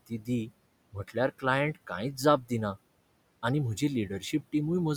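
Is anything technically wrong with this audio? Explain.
Yes, there are two related problems, both from noise suppression on this speech.

Noise suppressor artifacts run through the whole clip. The suppressor pulls down whatever bands it judges to be steady noise, frame by frame, by about 21 dB here. The room noise itself sits about 20 dB under the speech, and you can hear it pumping: it drops away in the gaps and comes back up under the talking.

There is also speech cut by the noise suppressor in three places: 0.07 to 0.28 s, 0.92 to 1.16 s, and 2.42 to 2.51 s. Each time, the suppressor mistook quiet parts of the speech for background and turned them down with it, about 15, 16 and 13 dB at the deepest. Roughly a tenth of a second of speech is affected in each spot, so soft consonants or word edges sound swallowed and faint.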